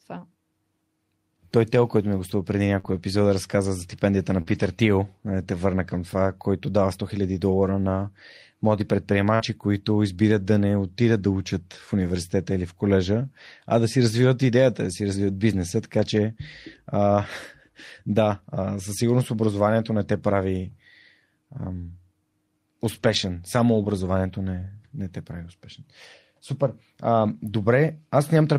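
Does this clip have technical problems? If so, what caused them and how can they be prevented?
Yes. Between 2.79 and 4.79 s, just after "ми е гостува преди", there are scattered short gaps: about three brief losses, the longest around 40 ms, together about a tenth of a second. Each was patched by continuing the preceding sound. On a spectrogram, harmonics briefly smear or stretch flat, and the waveform shows small repeated-looking cycles. A steadier network path with a larger jitter buffer would prevent this.

At 9.35–9.42 s, between "долара на млади" and "които избират да не", a short concealed packet loss covers 40 ms of missing audio with about 45 ms of extrapolated sound, heard as a quick smear. The spectrogram shows a frozen, slightly blurred patch that then blends back into detailed speech. Reducing packet loss and late arrival on the link would prevent it.

A lost packet rebuilt from error correction can be heard at 9.40–9.42 s (20 ms), 22.96–23.18 s (120 ms, which fits six 20 ms packets), and 27.26–27.32 s (40 ms). 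The decoder played low-bitrate backup copies, so there is no gap, only rougher, noisier frames. These look grainier on a spectrogram. Fixing the underlying loss, or raising the error-correction bitrate, would prevent it.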